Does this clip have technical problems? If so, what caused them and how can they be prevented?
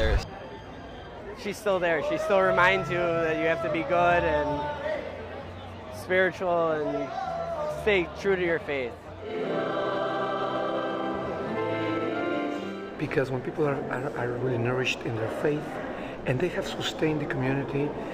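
Yes. Imaging from linear upsampling runs throughout: the top end sounds dulled, with a faint metallic shimmer on sibilants. On a spectrogram, a mirrored copy of the content appears between 11 and 22 kHz, roughly 40 dB down, which fits a 22 kHz source linearly interpolated to 48 kHz. Prevent it by resampling with a proper band-limited (windowed-sinc or polyphase) filter.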